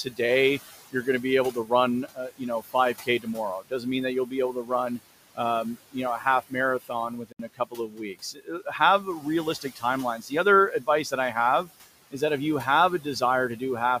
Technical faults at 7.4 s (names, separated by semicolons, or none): noise suppressor artifacts; speech cut by the noise suppressor; Bluetooth dropout